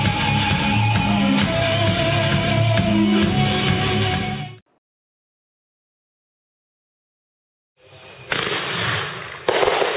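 There are no technical faults to describe in this audio.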